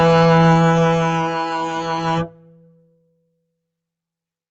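Throughout the music, a noise suppressor applied to music is at work. It was built for speech, so it treats sustained tones and ambience as noise. Gain swings by around 20 dB. Held sounds and tails pump and thin, while attacks survive. The top end stops at 8 kHz, which fits a wideband call codec.

From 2.25 to 3.32 s, there is sound cut by the noise suppressor. For roughly a second, sustained material is pulled down harder, dropping by about 15 dB at its deepest. Decays are clipped short and the passage sounds hollow and withdrawn.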